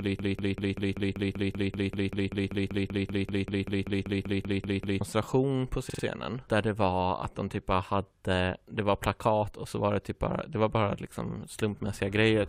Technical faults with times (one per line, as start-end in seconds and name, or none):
0.00-5.01 broken-record loop
5.89-6.03 repeated frames